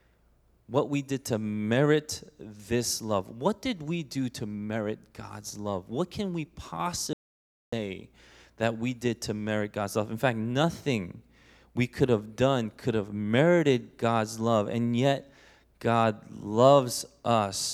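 An audio dropout to silence runs from 7.13 s to 7.73 s, taking out about 0.59 s of the speech. The sound stops abruptly mid-flow and returns just as suddenly, and the gap between is dead silence with no room tone at all. The input was likely lost for that stretch, through a disconnected device, a failed link or a stray mute, while recording carried on writing silence, so whatever was spoken there is gone.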